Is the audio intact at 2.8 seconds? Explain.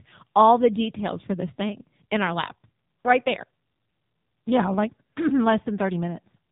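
No. At 2.8 s, as across the whole clip, the speech has passed through the AMR narrowband mobile codec. Its 8 kHz sampling leaves nothing above 3.7 kHz, so the sound is dull and telephone-thin. Each 20 ms frame is rebuilt from a vocal-tract model excited by sparse pulses, and the damage here is heavy: the voice comes out buzzy and synthetic, which points to a low rate around 6.7 kbps.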